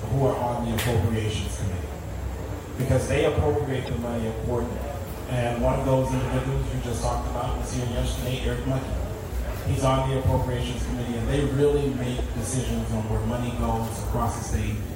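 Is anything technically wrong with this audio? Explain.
Yes. A corrupt frame was decoded twice: from 3.85 to 3.89 s, spanning a few frames, and from 12.18 to 12.21 s, about one frame. Flipped bits in each compressed frame were decoded anyway, so misread gains or codes put energy at the wrong frequencies. Each is heard as a brief artefact lasting only that span.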